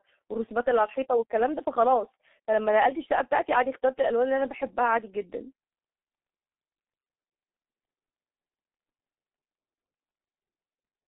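A speech clip carrying heavy G.723.1 codec damage from start to finish. The sound is confined to a narrow telephone band, roughly 250 Hz to 3.7 kHz. Nothing reaches above that, so it sounds muffled and boxed in. The codec models the voice in long 30 ms frames and refreshes that model slowly. Fast changes get smeared. Consonants blur and the tone turns hoarse. The coarseness fits a very low rate of about 6.3 kbit/s.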